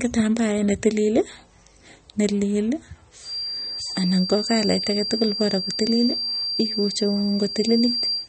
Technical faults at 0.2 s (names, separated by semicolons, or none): MP3 compression